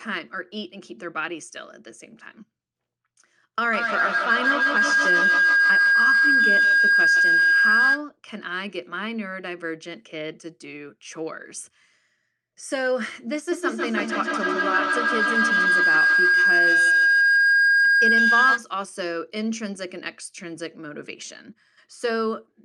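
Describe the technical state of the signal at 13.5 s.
At 13.5 s a feedback howl takes hold, running to 18.71 s. Two devices share a room and call, so each mic-to-speaker trip adds gain. Unlike a fading echo, repeats swell into a tone near 1.5 kHz, with a loop delay of 150 ms or so, peaking about 8 dB above speech.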